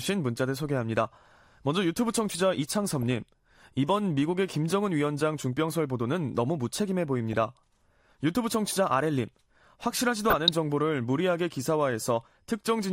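DAB burbling appears at 2.91–3.17 s, 7.33–7.35 s and 10.30–10.49 s. Residual bit errors, around a few tenths of a percent, corrupt the MP2 samples and scale factors, so individual sub-bands jump in level for up to a frame, giving short blips of noise over the speech.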